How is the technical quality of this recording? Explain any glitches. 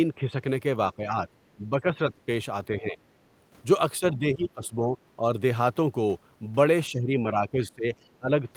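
The recording is marred by repeated double-talk suppression of the speech and two brief traces of the far end leaking through.

Speech suppressed in double talk occurs at 0.17–0.43 s, 0.96–2.27 s, 2.71–2.99 s, 3.99–5.23 s, and from 6.9 s to the end. The speech level sags, by roughly 5 dB in the first event and around 10 to 15 dB in the others. An echo canceller, likely unable to separate this talker from loudspeaker echo during overlap, pulled everything down.

The other side's voice leaking through shows up twice, at 4.64–4.98 s and 7.95–8.09 s. A faint second voice sits well under the speech, about 30 dB and about 40 dB below it respectively. It is likely residual loudspeaker echo that the canceller failed to remove from the microphone. The brief, buried fragments of a separate talker distinguish it from room reverberation, which would smear the main speech itself, and both traces fall inside suppressed stretches, where overlap was occurring.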